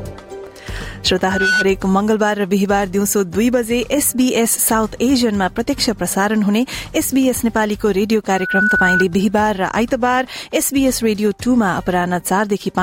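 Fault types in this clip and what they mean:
Loudspeaker feedback squeal, 1.22 to 1.69 s and 8.28 to 9.05 s: a microphone is picking up the loudspeaker it drives, and at 1.5 kHz the gain around that loop exceeds one, so this single tone feeds on itself. Each time it swells over roughly a third of a second into a piercing whistle that stands a few decibels above the rest of the audio, then stops once the loop is broken.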